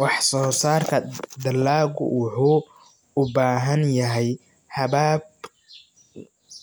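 Nothing technical goes wrong anywhere in this speech recording, so there's no fault to describe at any point.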